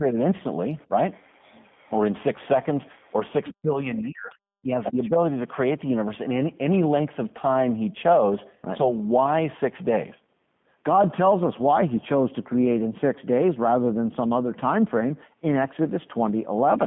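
Speech, sent through the G.729 codec at 8 kbit/s. The whole clip is confined to a narrow band, from about 150 Hz up to 3.5 kHz. Nothing above that survives. The codec damage is plainly audible. The voice is rebuilt from a compact model of the vocal tract and pitch, not carried as a waveform. So it comes out rough and slightly synthetic, and consonants lose their crispness.

Two stretches of speech suppressed in double talk follow. From 0.00 to 0.17 s the voice dips briefly, by around 15 dB. From 3.51 to 4.39 s the drop is far deeper, near 40 dB, so the talker almost vanishes for close to a second. The likely cause is an echo canceller that heard both sides at once. It could not tell the talker from the loudspeaker echo, so it pulled everything down.

There are also two moments of the other side's voice leaking through. From 2.96 to 3.13 s a faint second voice sits far below the talker, barely audible. 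From 4.84 to 5.09 s it is much stronger, only around 10 dB under the main speech. Here the echo canceller likely left part of the loudspeaker sound in the microphone signal.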